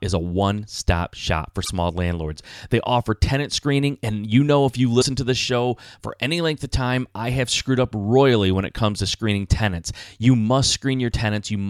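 A brief garbled break interrupts the speech twice, from 1.63 to 1.69 s and from 5.00 to 5.04 s, with the audio jumping ahead. These are likely a broken MP3 bit reservoir. The decoder lost a stretch of frames, then tried to borrow the next frame's data from earlier bytes that now belong to a different frame. Each disturbance spans roughly one to two 26.1 ms frames.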